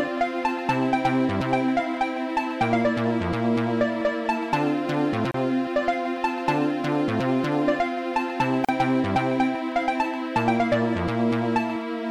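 The audio has two gaps at joins of encoded pieces. Sound drops out at 5.31 s for about 31 ms, then at 8.65 s for about 39 ms. Each silence has smeared edges. Separately encoded pieces kept their start delay and last-frame padding, so sound resumes where it stopped.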